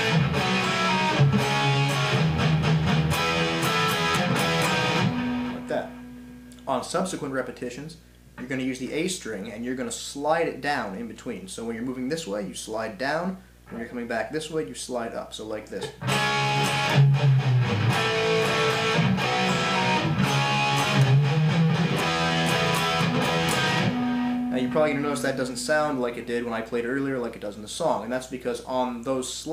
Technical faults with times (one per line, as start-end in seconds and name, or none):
0.00-29.53 video or display buzz